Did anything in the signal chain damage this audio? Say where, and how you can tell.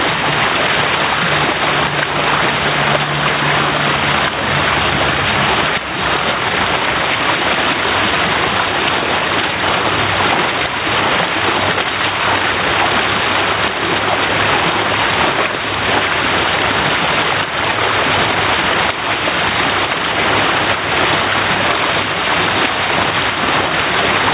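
Yes, there's gain pumping from start to finish. The level swings by around 5 dB, and everything sits squashed together in level. That points to the call-processing stage, most likely input gain set far too hot with a fast limiter or compressor hauling it back down on every peak. The call codec's band limit, with nothing above 4 kHz, fits G.711 mu-law.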